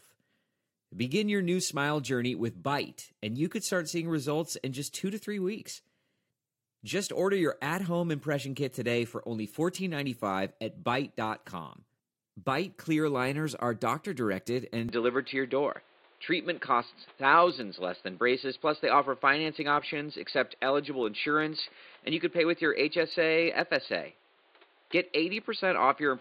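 Right after "liners are doctor directed", at 14.89 s, the speech abruptly turns duller and boxier and stays that way to the end. Nothing remains above 4.7 kHz, the level shifts by roughly 5 dB, and new background noise appears, sitting about 35 dB below the speech. There's no gap at the change. This is likely an input switched to a poorer device, a narrower-band device with its own tone, level and noise floor.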